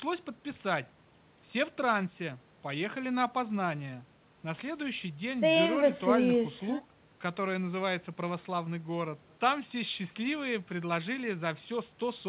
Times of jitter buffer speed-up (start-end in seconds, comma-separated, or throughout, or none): none